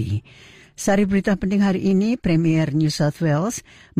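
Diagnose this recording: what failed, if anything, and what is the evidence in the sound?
A single sharp click at 1.91 s: dropped samples, likely in the driver or buffer, where a fraction of a millisecond vanished and the waveform jumped.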